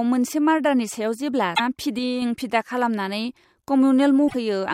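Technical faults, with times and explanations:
1.53–1.60 s and 4.25–4.35 s, damaged data in a compressed stream: each spot produces a brief glitch lasting about 70 ms and 110 ms respectively. Corrupted bytes in the compressed stream leave the decoder unable to read those frames correctly. It outputs garbled material, loses its frame alignment, and skips forward to the next valid header, which breaks the sound at those points.
1.99–2.22 s, sudden gain jump: the level drops abruptly by about 4 dB at 1.99 s, with the background noise falling along with the sound, and it stays lower until 2.22 s. Because the change happens between one sample and the next, with no ramp, the step is audible as a hard edge rather than a fade. The likely cause is a digital gain setting or bit shift applied instantly rather than smoothed.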